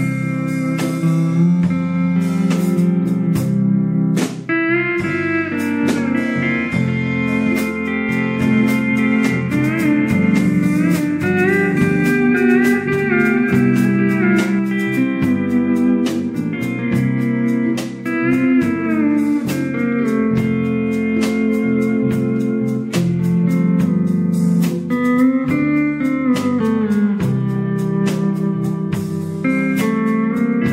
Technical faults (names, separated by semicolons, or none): doubled audio track